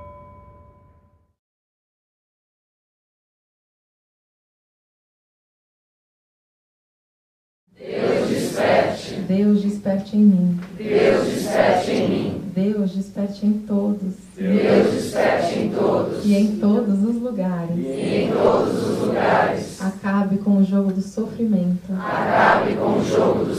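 No technical fault can be heard anywhere in the audio. Nothing in the sound calls for a time or a cause to be given.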